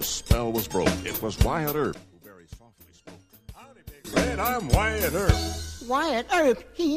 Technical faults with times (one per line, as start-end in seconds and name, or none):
1.94-4.05 one channel inverted